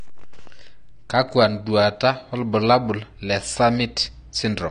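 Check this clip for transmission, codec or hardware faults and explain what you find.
There's one codec problem running through the whole clip: AAC compression damage, and it's plainly audible. Nothing comes through above 9.7 kHz, so the speech sounds dull and closed-in. Sibilants and sustained sounds pick up a smeared, warbly, fizzy texture. The likely cause is an AAC-LC encode at a low bitrate, roughly what you'd expect at 32 kbps. At that rate the encoder drops the cut-off and starves the upper bands, leaving gaps or noise-filled patches where the detail should be.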